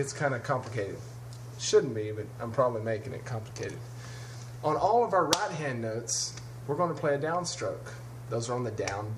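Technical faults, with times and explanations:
No technical faults are audible anywhere in this recording.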